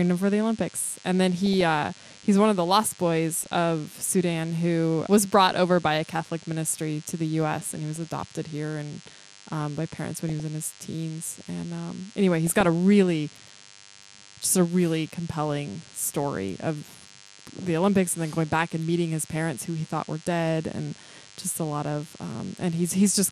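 From start to finish, a thin, steady buzz at 100 Hz with a dense harmonic series sits roughly 25 dB under the speech. This is DECT cordless phone buzz: a nearby handset or base station transmits a burst every 10 ms, and the audio circuitry rectifies it into this tone.

Throughout, the speech is dull and top-limited, with a gurgling, granular texture as upper bands drop in and out. This is likely MP2 compression at a low bitrate, around 80 kbps. Too few bits are spread across the sub-bands, so the higher ones are switched off and the rest are coarsely quantised.

DAB burbling occurs in short patches at 1.46 to 1.61 s; 3.37 to 3.46 s, just after "one of the lost"; 7.95 to 8.29 s, between "and he" and "here and um by"; 10.29 to 10.40 s, between "um by parents when" and "in his teens"; and 12.47 to 12.65 s. Reception errors that got past the error correction corrupt samples, putting short blips of noise in single sub-bands, and scale factors, so individual sub-bands jump in level for up to a frame.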